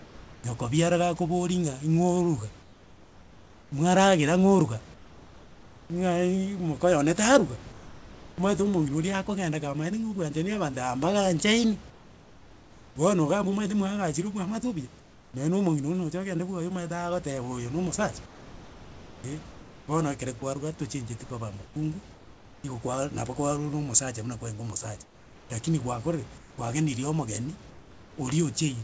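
The pauses at 0–0.44 s (before "nyoko biara"), 2.62–5.9, 7.72–8.38, 11.9–12.96, 15.0–15.34, 18.26–19.88 (before "bono ekere"), 21.64–22.64 (between "tochenjeti koba" and "igo kwaaa") and 25.04–28.18 s have comfort noise in place of the background. The real room sound turns into a flat, featureless hiss, sometimes about 3–4 dB quieter. It's likely the sender going quiet between phrases while the receiver fills in synthetic noise.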